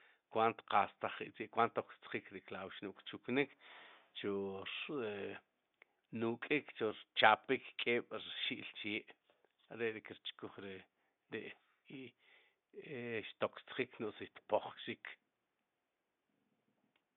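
No technical faults are audible.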